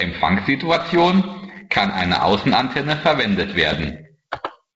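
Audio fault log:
1.78–1.96 s and 3.73–3.86 s, bit errors on an ADPCM link: flipped bits, denser in the second burst, throw off the decoder's step size and predictor, causing pops, rough bursts and brief level jumps.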